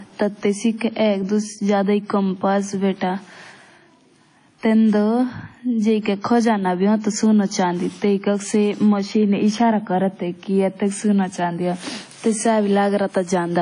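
From start to finish, the speech carries plainly audible codec damage, likely from WMA compression. Nothing is present above 10.1 kHz, so the top end sounds dull and cut off. The transform coder spreads its quantisation noise over tens of milliseconds. That gives a ringing, washy smear around each sound. A hiss rises and falls with the signal. Weak spectral detail has been zeroed out. The damage fits a low bitrate near 32 kbps.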